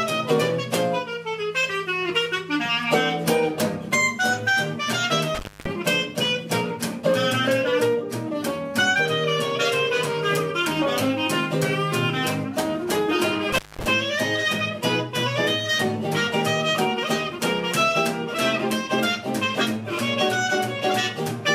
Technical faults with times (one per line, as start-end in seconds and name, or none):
5.35-5.70 intermittent contact
13.52-13.85 intermittent contact